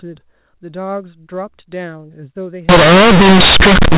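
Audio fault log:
2.69–3.97 s, companded audio read as linear: A-law bytes are played back as linear 8-bit samples with no expansion, so each sign change swings the output across about half its range. Quiet speech becomes as large as loud speech, giving harsh buzzy distortion and loud noise in pauses.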